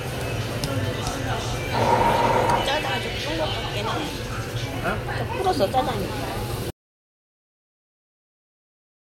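From the start to 2.46 s there is a doubled audio track: a dry copy about 5 dB lower trails by roughly 0.4 s and cuts off abruptly, likely from a second, slower capture path. At 6.70 s an audio dropout to silence begins and runs to the end, leaving silence with no room tone, likely from a lost input.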